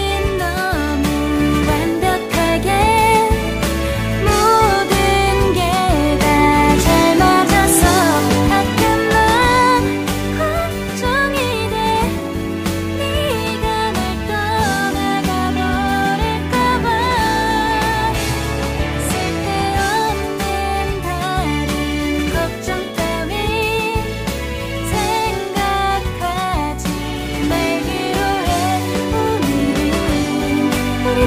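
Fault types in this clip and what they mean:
No technical fault can be heard anywhere in this clip. Nothing in the audio calls for a fault description.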